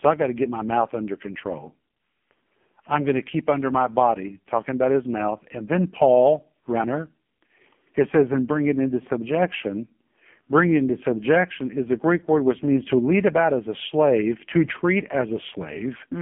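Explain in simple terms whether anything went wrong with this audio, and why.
From the first second to the end, the speech sounds thin, muffled and buzzy, robotic, like a weak mobile phone call. The cause is the AMR narrowband mobile codec, an old phone-network compressor. It keeps only a narrow strip of sound, roughly 200 Hz to 3.4 kHz, with nothing above 3.5 kHz. It then rebuilds the voice from a simple model of the throat, and heavy squeezing here leaves that synthetic buzz.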